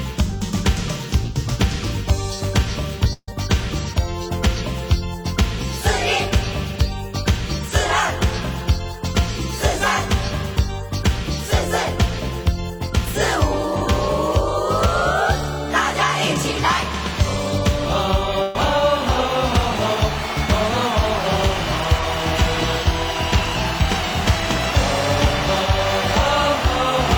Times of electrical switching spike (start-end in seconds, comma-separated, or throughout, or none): none